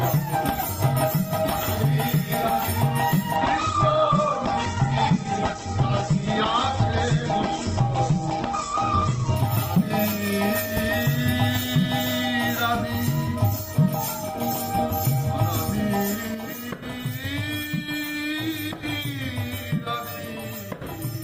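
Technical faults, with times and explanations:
3.36–9.36 s, adaptive stream at a lower bitrate: for six seconds the treble disappears above 8.3 kHz and the sound turns thinner, with stronger codec artefacts. This fits a switch from about 64 to 12 kbit/s Opus. On a spectrogram, a hard ceiling appears abruptly with no gap, then lifts again.
16.35 s to the end, sudden gain jump: the level drops by about 6 dB from one sample to the next, and the background noise drops with it. The likely cause is a digital gain change applied without a ramp. On a waveform the envelope shrinks to roughly half height at one instant.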